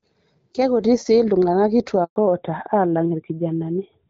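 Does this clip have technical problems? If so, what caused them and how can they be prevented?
Yes. A handover gap runs from 2.04 to 2.16 s: the speech fades out within a few tens of milliseconds and stays silent for 120 ms while the call moves between networks, because no speech frames reach the receiver during the switch. Whatever was said in that window is lost. Prevention: use make-before-break handover (for example SRVCC with pre-established bearers) and tune handover thresholds so that frame delivery continues across the switch.

From 2.16 s to the end, a fallback to narrowband follows the gap. Before it, the AMR wideband (HD Voice) codec sounds clear at a rate consistent with 12.65 kbit/s. Afterwards nothing is present above 4 kHz, and the speech turns duller and rougher, which points to a renegotiation onto AMR-NB. Prevention: make sure the target network and both endpoints support AMR-WB so that codec negotiation does not drop to narrowband after handover.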